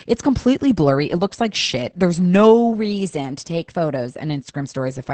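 The speech sounds muffled, hoarse and faintly robotic throughout, with nothing above 8.5 kHz. This is heavy Opus voice compression: the linear-prediction SILK coder at wideband codes the excitation coarsely, which fits a bitrate around 10 kbps. From 2.73 s to 4.19 s the audio runs about 6% fast and about a semitone (101 cents) sharp, then snaps back. This is likely a drift correction step, where clock-matching software briefly changed the playback rate to rebalance its buffer.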